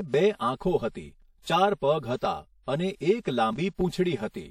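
The speech sounds hollow and phasey from start to finish, with fixed notches that never move. This is channel delay (comb filtering). One channel arrives about 5 ms behind the other, and summing them to mono cancels evenly spaced frequencies, the first near 100 Hz. Throughout, the speech also carries plainly audible codec damage: a ringing, washy quality with hiss that rises and falls with the signal, and nothing above 18.1 kHz. The likely cause is WMA compression. Its long transform blocks smear quantisation noise over tens of milliseconds, and the damage fits a bitrate around 48 kbps.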